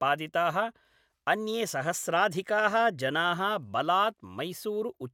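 No technical faults can be heard in this speech recording at any point.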